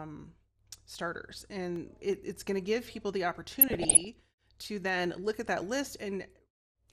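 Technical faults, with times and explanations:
throughout MP2 compression. The speech sounds dull and gurgling. Upper frequencies come and go, and the remaining detail has a coarse, granular edge. This is likely MPEG Layer II coding at a rate too low for the material. The coder divides the sound into 32 sub-bands and shares a small bit budget among them. Upper bands get switched off, and the rest are quantised roughly. The damage is plainly audible and fits a bitrate of around 80 kbps.
1.58 to 2.13 s CD scratch ticks. Four short ticks sit close together in this half second, about seven a second. Each lasts about a millisecond at most. A scratch destroys more data than the error correction can rebuild, and this recurs on each turn of the disc. The player fills or mutes the lost samples. The result is a brief click that repeats at the disc's rotation rate.
3.61 to 4.06 s DAB burbling. For about half a second the speech is overlaid with short blips of noise in single sub-bands. 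Weak reception lets bit errors, here under one percent, slip past the error correction into the MP2 data. Corrupted samples and scale factors make single bands misbehave for up to a coding frame at a time. The sound points to damage across roughly nineteen frames.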